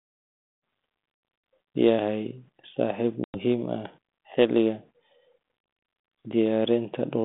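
A telephone speech recording, faded in over its first moments up to 0.66 s and band-limited to roughly 200 Hz to 3.6 kHz, consistent with G.726 ADPCM at 32 kbit/s. At 3.24 s the audio drops into a hard-edged silence lasting about 100 ms, and when it resumes it comes back slightly distorted before settling by about 3.39 s. This is packet loss on an ADPCM call: a handful of packets went missing and were replaced by silence, so the receiving decoder's adaptive predictor and step size drifted out of step with the sender's. The first samples after the gap were then decoded against the wrong baseline, and the decoder needed some tens of milliseconds to re-converge.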